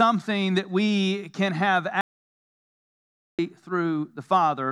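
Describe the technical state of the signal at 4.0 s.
At 4.0 s the signal is intact, with no audible dropout, distortion, clipping, noise burst or other fault.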